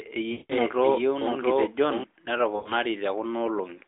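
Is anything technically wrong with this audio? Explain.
Yes. There are two problems in this speech.

First, a doubled audio track runs from the start until 2.04 s. A second, full-band copy of the speech sits roughly 0.7 s behind the original, at about the same level. It has no decay and no room colour, so it sounds like a clean second take rather than an echo. It stops abruptly at 2.04 s. The likely cause is a slower second capture path, or an edit holding two copies out of step.

Second, there are lost AMR speech frames, from 0.32 to 0.53 s and from 2.56 to 2.72 s. Radio errors corrupted frames, and the decoder rebuilt them from the last good pitch and vocal-tract settings at falling gain. The first gap, about 180 ms, fits a run of roughly nine frames. The sound smears, drones and fades toward silence. The second gap, about 100 ms, fits about five frames. It gives a shorter drawn-out dropout. 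After each gap the speech returns weak or rough for a moment. The narrowband line limit, about 300 Hz to 3.6 kHz, is audible throughout.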